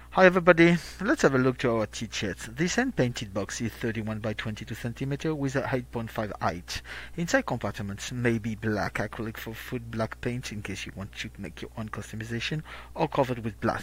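No technical faults are audible anywhere in the recording.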